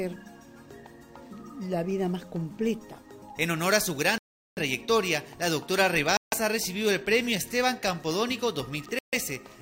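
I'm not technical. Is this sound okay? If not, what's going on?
No, it isn't quite okay. The sound drops out to silence three times: at 4.18 s for about 0.39 s, at 6.17 s for about 0.15 s, and at 8.99 s for about 0.14 s. Each gap is a Bluetooth stall, most likely caused by wireless interference holding up the audio. The headphones ran out of sound to play, so playback simply paused until the missing pieces arrived, then carried on.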